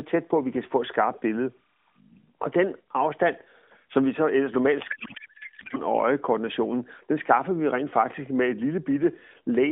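From 4.9 to 5.78 s, a codec payload misread: AMR frames packed in octet-aligned form are being unpacked as if they were bandwidth-efficient, so the decoder pulls every field from the wrong bit positions. For those 0.88 seconds the speech gives way to garbled noise and warble that barely tracks it, riding on the light, narrowband AMR-NB sound of the line, which fits the 12.2 kbps mode, before the decoder recovers.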